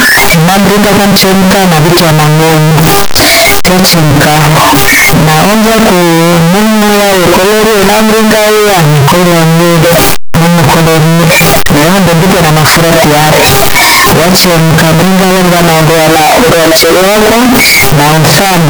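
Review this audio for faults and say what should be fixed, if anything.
From start to finish the speech is buried under a very loud, harsh buzz-like distortion, and the pauses between phrases are as loud as the talking itself. This is likely signed and unsigned mixed up: the 16-bit samples are being interpreted with the wrong sign convention, so the top bit is flipped, and every time the waveform crosses zero it lurches from one extreme of the range to the other. To prevent it, make sure the reader and writer agree on signed or unsigned 16-bit sample format before decoding.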